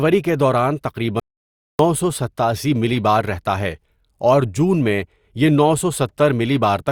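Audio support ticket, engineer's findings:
Audio dropout to silence, 1.20 to 1.79 s, right after "کے دوران", speech back at "سو ستاسی ملی بار". About 0.6 s of silence, no room tone at all. Likely input loss upstream (cable, link or mute), recorder kept writing silence, so that stretch of speech is gone.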